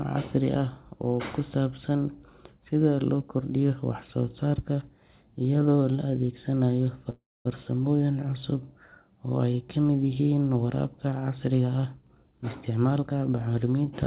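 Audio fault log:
7.10–7.48 s, call audio freeze: Right after "la adeegsanayo" the speech halts and its last sound continues as a brief fading buzz, then falls to about 0.25 s of silence before picking up exactly where it stopped. The likely cause is delayed packets emptying the jitter buffer. No speech is lost, but everything afterwards plays about 0.35 s later.
11.64–13.30 s, jitter buffer speed-up: Speech runs at about 110% speed with the pitch unchanged and sounds rushed. The receiver repeatedly cut out short pitch-period slices, roughly 150 ms in all, to shrink a jitter buffer holding more audio than its target.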